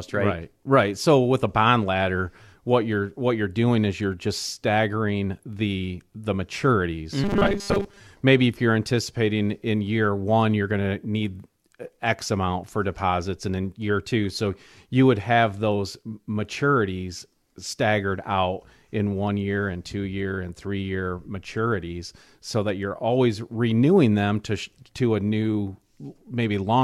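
Robotic sound from repeated short buffers runs from 7.24 to 8.01 s: the speech collapses into a rigid, metallic 200 Hz buzz. This is likely caused by late-arriving audio being replaced by repeats of the last 5 ms chunk, with most of the real signal skipped.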